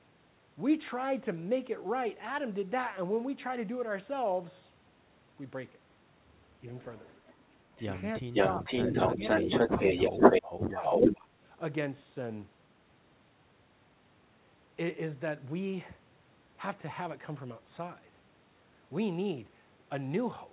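Speech clip carrying an echo leak: a delayed copy of the speech, about half a second behind (511 ms, later 402 ms), at 6.8–7.43 s, 7.75–7.83 s, 8.15–10.42 s and 10.84–11.21 s. It starts faint but later rises above the speech itself, showing on a spectrogram as repeated, time-shifted harmonic patterns. The likely cause is a far-end loudspeaker echo that the echo canceller failed to remove. Speech suppressed in double talk follows at 8.26–9.79 s and 10.1–11.19 s. The waveform shows the talker's envelope dipping by roughly 15 to 20 dB while the echo plays, likely because the canceller ducked both signals at once. All of this sits inside the G.711 band, which stops at 4 kHz.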